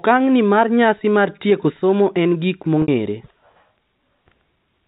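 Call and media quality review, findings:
Brief held, buzzy tone at 2.82–2.88 s, just after "tieko somo en giko"; speech resumes through a short cross-fade. Packet loss with pitch repetition: the receiver's concealment bridged a 60 ms gap, which fits three 20 ms packets, by repeating the last pitch period. G.711 telephone coding path: band-limited to 4 kHz, with coding damage faint at most.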